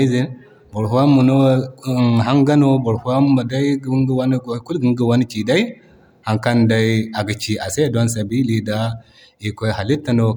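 No faults are audible anywhere in the recording.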